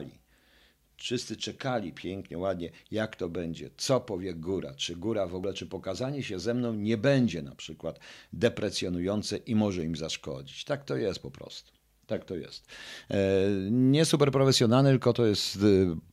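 Nothing goes wrong anywhere in this stretch of speech, so there's no moment worth pointing to and no fault to walk through.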